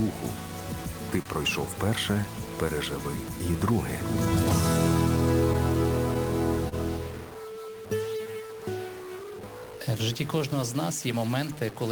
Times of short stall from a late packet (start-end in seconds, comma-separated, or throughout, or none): 1.22-1.28, 6.69-6.75